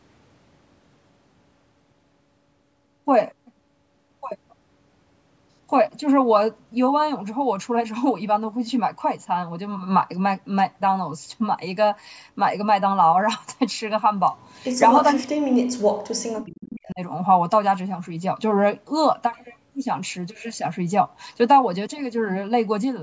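Speech suppressed in double talk, from 15.13 to 17.0 s: the speech sinks by around 40 dB at its deepest for about two seconds, likely because an echo canceller mistook the near-end talker for loudspeaker echo while both sides spoke.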